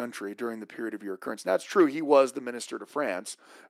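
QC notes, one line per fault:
No fault found in this speech clip.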